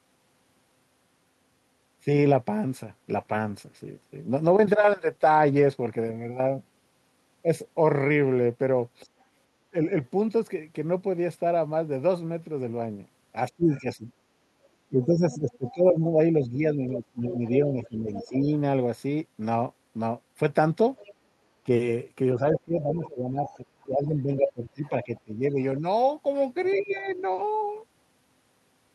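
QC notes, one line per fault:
3.2–5.79 s, call bitrate drop: the speech turns coarse and watery for about 2.5 s, consistent with the encoder falling from around 64 to 28 kbps, then clears.
9.21–10.08 s, 13.73–18.3 s, 20.97–27.2 s, other side's voice leaking through: a second voice sits under the speech, about 30 dB down at first, then about 15 and about 20 dB down. This is likely loudspeaker echo left by the echo canceller, and it is added sound rather than loss.
13.5–18.47 s and 21.66–27.18 s, speech suppressed in double talk: the talker's own speech dips by up to about 15 dB, for roughly 3 s in each span, while the leaked voice is present. This is likely the canceller ducking both sides at once, so it removes level instead of adding sound.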